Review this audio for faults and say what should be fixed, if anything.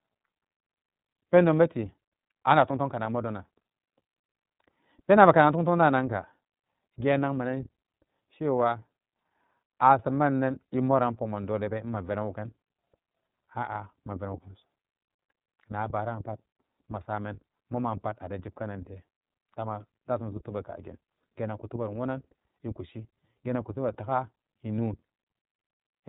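The speech sounds narrow, slightly rough and synthetic throughout, with nothing above about 3.8 kHz. This is plainly audible iLBC codec damage: each frame's excitation is coded independently at a low rate, which fits 30 ms frames near 13.3 kbps. Prevent it by using a wideband codec.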